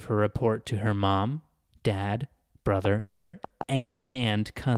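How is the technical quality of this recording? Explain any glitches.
The recording is clearly degraded in its second half, where a ticking overlay and several hold-ups in the speech pile up within about two seconds.

Train of clicks, from 2.85 s to the end: right after "to her mom dad", sharp, similar-sounding ticks start popping over the speech, about 4.3 per second at an uneven pace and roughly 10 dB above the speech. This is likely interference from nearby equipment or a faulty connection or power supply injecting repeated pulses.

Call audio freeze, 2.99–3.35 s and 3.75–4.17 s: the sound stops moving forward and turns into a fading buzz or hiss continuing the last sound. The first lasts 340 ms. The second runs 400 ms and ends in about 240 ms of silence. Packets were likely held up in transit, emptying the jitter buffer. Speech then resumes where it left off, so nothing is lost but gaps are inserted.

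Short stall from a late packet, 3.47–3.52 s: one sound is held about 30 ms too long, with a slight buzz or dip. A single packet missed its slot, so the receiver stretched the previous audio until it arrived, then continued without losing anything.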